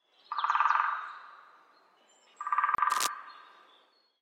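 A gap at a join of encoded pieces breaks the sound from 2.75 to 2.78 s: about 34 ms of silence where separately encoded sections were butted together untrimmed, the encoder's start-up delay and last-frame padding left in. On a waveform it shows as a flat dropout with abrupt, slightly smeared edges, and as a thin blank vertical strip across the spectrogram before the sound resumes where it stopped. Just after, from 2.90 to 3.08 s, cable scratch noise rides over the audio as a dense, uneven rustle only a little quieter than the sound itself. It is likely from a worn cable, connector or control being moved and its contact resistance jumping about. It appears as ragged broadband speckle in the spectrogram and spiky, irregular fuzz on the waveform.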